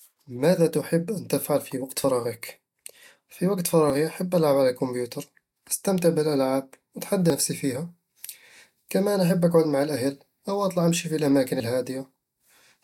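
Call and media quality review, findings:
Dropped buffer (overrun), 3.9 s and 7.3 s: jump in the speech after "في وقت" and after "أستمتع بالألعاب وأتحدى". Likely capture overrun: samples were overwritten before being read, so about 20 ms and 40 ms were skipped.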